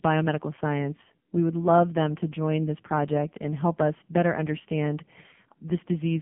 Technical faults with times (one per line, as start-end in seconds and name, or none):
0.00-6.22 AMR narrowband mobile codec